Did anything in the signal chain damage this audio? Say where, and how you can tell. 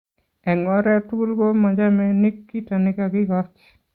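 No, nothing along the chain seems to have harmed this bit of speech, and I can't point to any stage where the signal picked up damage.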